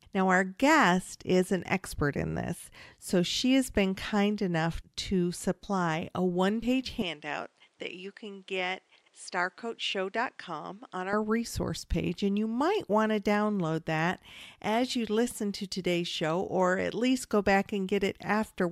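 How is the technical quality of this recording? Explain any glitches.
One stretch of the recording shows a clear change in quality, between 7.02 and 11.13 s. Just after "supply a one page" the speech goes duller and boxy, loses its top end above about 10.5 kHz, drops roughly 5 dB in level, and gains a faint new noise floor around 40 dB below the speech. There is no gap at the changeover. The full sound returns at "resource page and you". This pattern is most likely an input switched to a poorer device, with the recording briefly taken from a narrower-band microphone that has its own tone, gain and noise, before the original input was restored.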